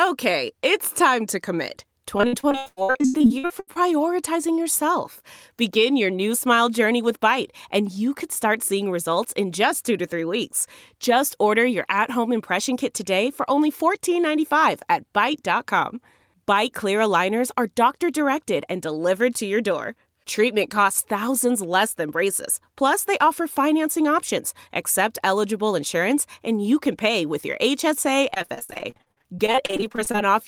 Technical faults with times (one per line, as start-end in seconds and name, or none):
2.17-3.87 repeated packet loss (robotic sound)
28.30-30.18 repeated packet loss (robotic sound)